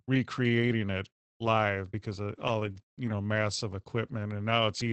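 Around 2.71 to 2.79 s there's a short stall from a late packet: the jitter buffer ran dry, so the last sound gets held about 41 ms too long with a slight buzz or dip, and nothing's actually lost. Overlapping its tail, 2.76 to 2.82 s and again 3.06 to 3.12 s, you get a lost packet rebuilt from error correction, each about 60 ms. Opus filled those from the low-bitrate copy carried in the next packet, so there's no gap, just a rougher, noisier patch. The 8 kHz audio bandwidth through the call codec fits a wideband Opus setting.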